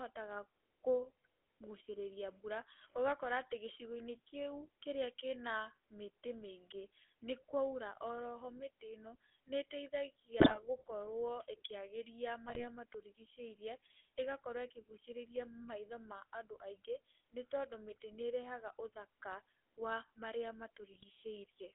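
From the start, the speech carries GSM full-rate codec coloration: a buzzy, gravelly roughness from pulse-driven vocal-tract modelling, consistent with 13 kbps coding. A spectrogram shows energy confined to roughly 300 Hz to 3.4 kHz, with coarse, smeared harmonics and nothing above.

GSM bit errors then strike at 10.40 to 10.61 s, 12.46 to 12.65 s, and 20.92 to 21.04 s, just after "ĩrehaga ũthaka wa marĩa". Corrupted filter, pitch and gain values produce squawks and gargling, seen as sudden waveform spikes and distorted, smeared spectral bands.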